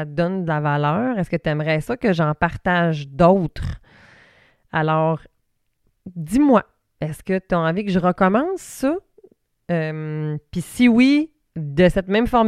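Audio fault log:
Nothing to log here, as this speech recording has no technical faults to note anywhere in it.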